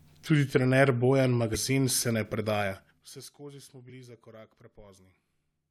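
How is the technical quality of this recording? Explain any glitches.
The recording has two kinds of glitch: corrupted compressed data in two places, and a stepped level drop in between.

Damaged data in a compressed stream, from 1.54 to 1.57 s and again from 3.89 to 3.91 s: part of the encoded speech stream was corrupted, so the decoder misread those frames, lost sync and hunted for the next valid frame header. Each spot is heard as a brief glitch in the speech.

Zipper noise, from 2.59 to 3.28 s: the level was pulled down by about 25 dB in unsmoothed 2 dB steps, about fifteen a second, instead of along a continuous curve. Each step puts a small click into the speech, so a ticking, zipping texture rides on it as it fades.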